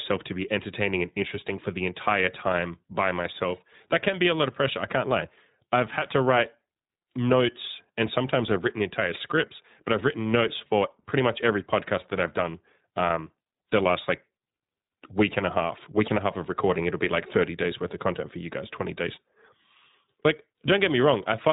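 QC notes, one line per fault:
Throughout: iLBC codec. The speech has a hard band limit, with nothing above about 3.8 kHz, so it sounds dull and telephone-like. The codec damage is plainly audible as a rough, slightly synthetic texture. Each short frame's excitation is coded on its own, without drawing on the previous one, and that loses fine waveform detail. The character points to the 20 ms frame mode, at a rate that fits about 15.2 kbps.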